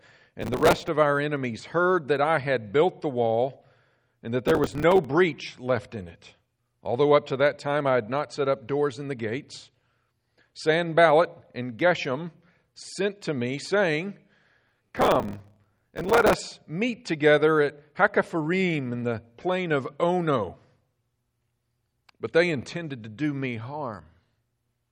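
The processor repeatedly fell behind on its short audio buffers, each only around 5 ms. Missed buffers were filled with leftover old audio, so hard-edged fragments were spliced into the speech in quick succession. This processor overload crackle is heard as gritty tearing from 0.41 to 0.88 s, again from 4.48 to 5.05 s, and longest from 14.67 to 16.34 s, where the sustained run reaches about 100 missed buffers.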